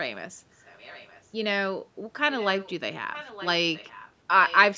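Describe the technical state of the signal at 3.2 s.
Echo leak, 3.13 to 3.47 s: a faint copy of the speech returns 919 ms late, roughly 15 dB down, likely from a far-end loudspeaker that its echo canceller didn't fully remove.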